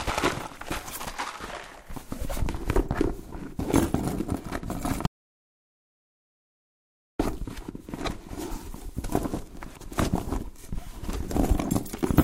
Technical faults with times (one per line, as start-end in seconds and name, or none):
5.07-7.19 audio dropout to silence